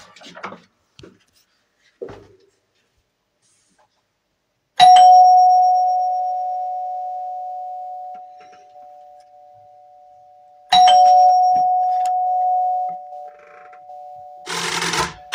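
No technical faults can be heard in this recording of sound. Nothing in the audio stands out as a problem.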